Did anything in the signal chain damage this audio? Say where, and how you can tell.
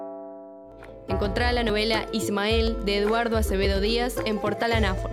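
Yes: audio missing between chunks, likely in the buffer stage. Skips of about 20 ms, spliced without silence, recur each second: 0.72, 1.70, 2.68, 3.65 s.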